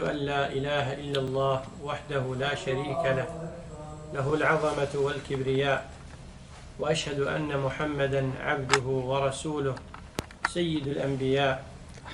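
The audio has overlapping chunks: at 1.28, 4.30, 7.32 and 10.34 s a brief slice of sound, about 20 ms long, plays twice, producing a click or stutter. The joins recur every 3.0 s, which points to the signal having been processed or transmitted in 3-second blocks where each new block begins 20 ms before the previous one finished, so the overlapping stretch is reproduced a second time at every boundary.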